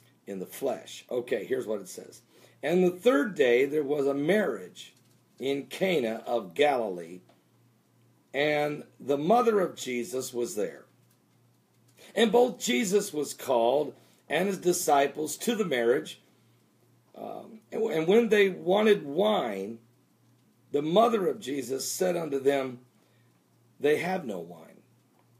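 No technical faults were found anywhere in this audio.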